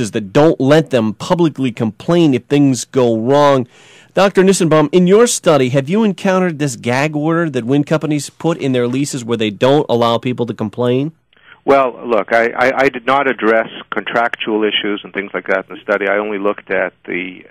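Hard clipping runs through the whole 17-second clip: the audio was driven about 8 dB beyond what the stage could pass, so its loudest peaks are sliced off flat. Only around one percent of samples hit the ceiling. The waveform shows squared-off flat tops, and a spectrogram shows brief vertical smears of harmonics reaching high up the spectrum at each clipped peak.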